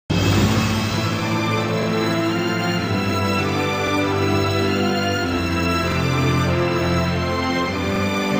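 Overlapping chunks at 1.83, 3.87, 5.92 and 7.96 s: each 2 s chunk starts 44 ms before the previous one ends, replaying that slice as a brief stutter at every join.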